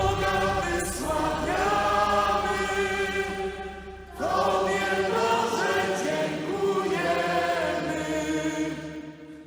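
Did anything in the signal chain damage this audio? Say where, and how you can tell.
Yes. A block size mismatch (truncated) at the driver or buffer stage runs through the whole recording, heard as a steady 100 Hz buzz. Each block arrives slightly longer than the reader takes, so its tail is discarded every 10 ms. The discarded portion is too small to change the speed perceptibly.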